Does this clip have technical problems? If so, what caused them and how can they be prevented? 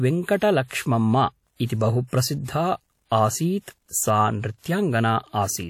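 Yes. Throughout the speech there is a ringing, washy quality, with a hiss that rises and falls along with the voice, and nothing is heard above about 17.4 kHz. This is likely WMA compression at a low bitrate, which fits roughly 48 kbps. A transform codec like this smears its quantisation noise over tens of milliseconds around each sound and drops weak spectral detail, and here the damage is plainly audible. To prevent it, record and deliver in a lossless format, or encode at a much higher bitrate.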